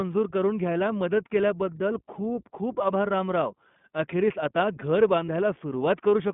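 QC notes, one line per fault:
throughout: iLBC codec. The whole clip sits in a narrow telephone band of roughly 150 Hz to 3.5 kHz. Each 20 ms frame's excitation is coded on its own, which fits iLBC's 20 ms mode at around 15 kbps. The coding damage is plainly audible as a rough, slightly synthetic edge on the speech. On a spectrogram there is a hard ceiling at 3.5 kHz with nothing above it, an empty strip below 150 Hz, and smeared, grainy harmonics.
5.26–5.29 s: lost iLBC frame. A 20 ms gap, which fits a single lost packet, is filled by the decoder repeating the last pitch cycle blended with noise. It passes as a brief held, faintly buzzy vowel fragment. Because iLBC frames decode independently, the speech recovers immediately afterward. On the waveform, one pitch period is copied several times at steady amplitude. The spectrogram shows flat, frozen harmonic lines over a slight noise haze for that 20 ms.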